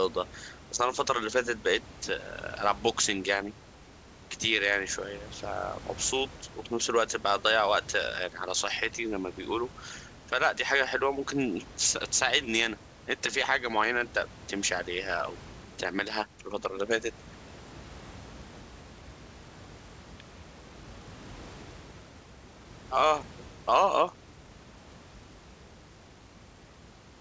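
Speech arrives over a call path with no technical faults, its band stopping at 8 kHz in a way that fits a G.722 codec, and room noise sits about 24 dB below the speech.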